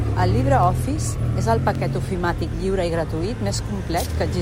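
A receiving device running on its own clock, unlocked from the sender, slips one sample roughly every half second, which fits a clock mismatch near 40 ppm. These word clock ticks run from 0.63 s to 3.99 s: about seven sharp, steadily spaced clicks.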